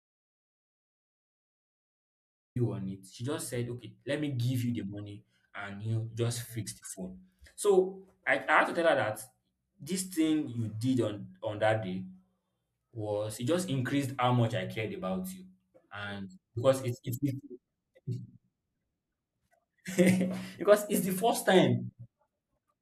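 Speech clip with an audio dropout to silence already under way at the start, lasting until 2.56 s: pure silence with no room tone, likely from lost input.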